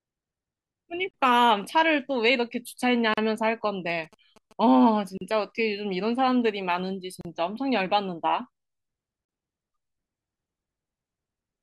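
At 1.11 to 1.14 s the speech drops out for about 29 ms. This is a gap at a join of encoded pieces. Separately encoded segments were butted together untrimmed. Encoder start-up silence and last-frame padding remain. The codec smears the edges.

The same gap returns every 2 s, at 3.14 to 3.17 s, about 38 ms long. The speech resumes exactly where it stopped.

From 3.89 to 4.53 s, GSM signalling bursts intrude. A nearby 2G phone is exchanging short radio bursts with the network. The audio circuit rectifies them. A galloping dit-dit-dit of short 217 Hz buzzes sits about 25 dB below the speech.

Two more join gaps of about 38 ms follow, at 5.17 to 5.21 s and 7.21 to 7.25 s.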